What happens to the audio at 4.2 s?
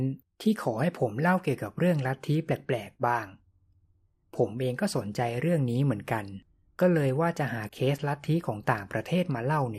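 At 4.2 s the speech sounds dull and gurgling, as throughout. This is likely MP2 compression, its starved upper sub-bands switched off, fitting an 80 kbps rate.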